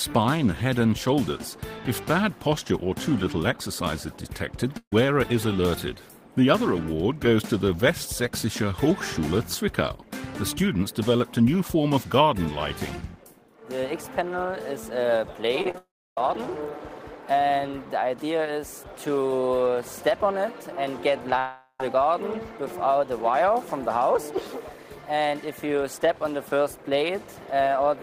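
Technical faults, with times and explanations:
4.77–4.93 s, burst of packet loss: about 150 ms of audio never arrives; the last sound is stretched and faded, ending in roughly 80 ms of silence before playback resumes further on.
15.62–15.75 s, repeated packet loss (robotic sound): four short holes, the longest 30 ms, are each patched by continuing the previous sound, so nearly half this span turns choppy.
15.78–16.18 s and 21.39–21.80 s, long network dropout: the sound trails off into a fading buzz or hiss and then stops, which is likely a long network dropout. About 390 ms and 400 ms of audio are missing, leaving around 300 ms and 70 ms of silence, before the sound comes back further on.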